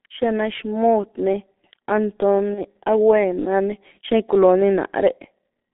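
From start to finish the speech passes through the G.723.1 codec, heavily degraded. The line band runs only from 200 Hz to 3.6 kHz, so the sound is muffled and thin. The hoarse, rough texture and smeared consonants come from a coarse voice model refreshed only every 30 ms, which fits a rate of about 6.3 kbit/s. Plain narrowband filtering would sound dull but clean, without this grainy hoarseness.

At about 2.55 to 2.61 s there is VoIP packet loss concealed by the speech codec. The gap fits a single lost 30 ms frame. The decoder filled it by repeating its last pitch and filter at falling gain, so the sound briefly turns into a fading buzzy tone or coloured noise rather than silence or a click. The voice stays weak or distorted for tens of milliseconds or more just after.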